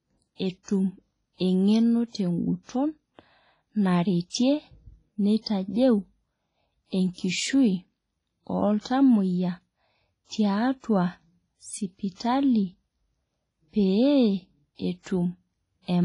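Ringing, washy texture with a hiss that swells and fades with the speech runs throughout, and nothing is heard above 10.4 kHz; likely heavy WMA compression at a low bitrate.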